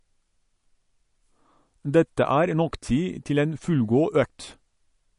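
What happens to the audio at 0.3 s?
At 0.3 s you're hearing the same thing that runs through the whole clip: it sounds like MP3 compression, and likely a fairly starved encode, the kind of damage that fits a bitrate around 40 kbps. The encoder has cut the treble flat at about 10.6 kHz, and weak frequency lines flicker in and out between frames, so the speech takes on a watery, swirly edge, with s sounds turning metallic and consonant attacks smeared.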